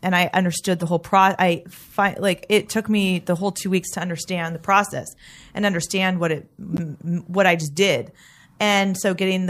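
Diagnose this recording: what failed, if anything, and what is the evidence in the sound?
The codec stage failed, with corrupt frames decoded. Two short bursts interrupt the speech. The first runs from 0.81 to 0.83 s and spans a few frames. Its error energy peaks around -20 dBFS. The second runs from 6.74 to 6.80 s, over a couple of frames, and is louder, near -15 dBFS. Each burst sounds like a brief chirp, squeak, blip or burst of noise. Flipped bits reached the decoder, which played the frames anyway. Misread gains and codes put energy at the wrong frequencies for each damaged frame.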